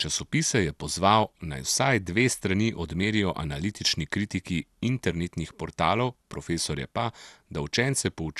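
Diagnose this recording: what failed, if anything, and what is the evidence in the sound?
The damage sits at the codec stage and runs through the whole speech clip: nothing is present above 12.2 kHz, the top flickers, and the remaining sound has a gurgling, granular roughness. This is likely MP2 compression at a starved rate, which fits something near 80 kbps. Layer II sub-band coding is switching whole upper bands off and quantising the rest coarsely. A plain low-pass filter would sound dull but stay clean, without that flicker or grit.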